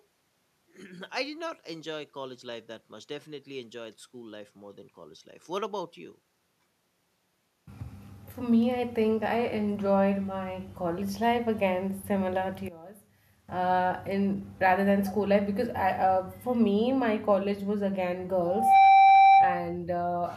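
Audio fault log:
12.68–13.48 s, one channel inverted: the speech drops by about 19 dB. The likely cause is one channel with reversed polarity cancelling the other in mono.
18.45–19.77 s, loudspeaker feedback squeal: a 781 Hz tone swells within about a third of a second to roughly 10 dB above the speech. The microphone is re-amplifying its own loudspeaker.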